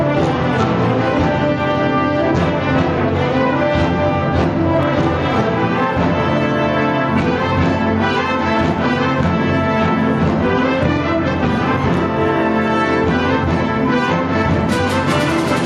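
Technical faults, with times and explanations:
Throughout, gain pumping: the level ducks by about 5 dB under each loud sound, likely excessive gain driving a fast limiter.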